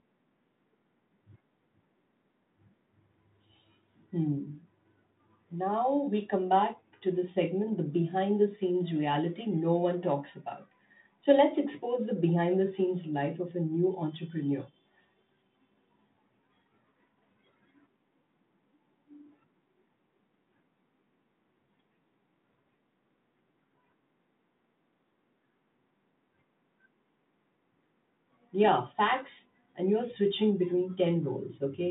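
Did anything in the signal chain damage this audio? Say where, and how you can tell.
No, nothing here damaged it; this is a normal telephone path through G.726 at 32 kbit/s, and what you hear from that is the narrow line band running from about 150 Hz up to 3.7 kHz and only a light trace of the coding itself.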